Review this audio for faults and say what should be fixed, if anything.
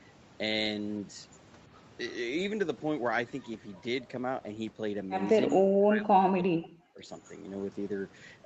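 From 5.48 to 7.03 s the speech drops out sharply, by roughly 40 dB. This is likely speech suppressed in double talk, with the echo canceller turning down the talker along with the loudspeaker echo. Better double-talk detection in the echo canceller would prevent it.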